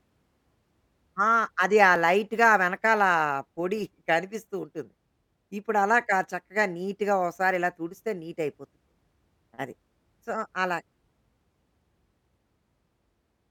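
At 1.96 s and again at 7.94 s, the speech skips forward by a few milliseconds where the two sides are butted together without silence. This is audio missing between chunks, likely from a recorder handling 3-second blocks and dropping a brief slice at each handover.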